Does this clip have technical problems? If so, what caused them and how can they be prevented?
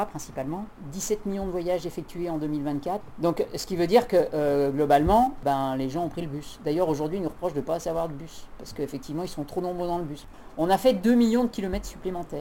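Yes. Sample clock jitter runs throughout, with timing wander of around 10 microseconds leaving a rough hiss roughly 25 dB below the signal. Unlike steady background noise, it swells on loud, bright passages and disappears in silence. A stable low-jitter clock prevents it.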